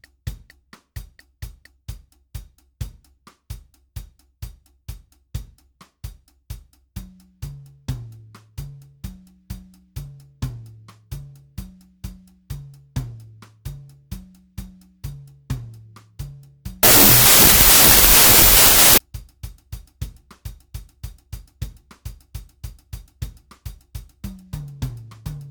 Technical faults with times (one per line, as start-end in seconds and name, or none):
16.83-18.98 wrong sample width